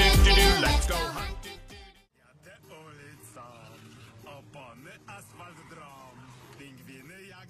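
From 2.63 s to 6.63 s the audio switches abruptly to an adaptive stream at a lower bitrate. Nothing is left above 12.3 kHz, the treble turns thin, and codec artefacts rise, which fits a drop to a low-rate HE-AAC version. Unlike a dropout, there is no gap, and unlike a fade, the quality changes instantly at both edges.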